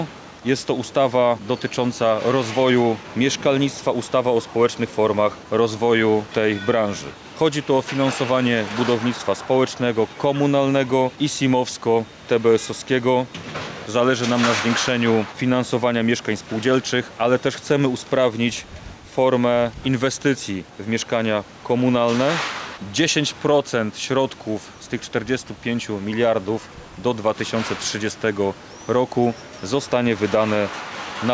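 Gain pumping runs through the whole clip: the level ducks by around 5 dB under each loud sound and then climbs back, leaving loud and soft passages squashed closer together. The likely cause is gain set far too high into a fast limiter or compressor. On a waveform the envelope looks flattened, with dips after loud onsets. The call microphone processing that shaped the audio also shows on a spectrogram as an empty band above 8 kHz and thinned lowest bass.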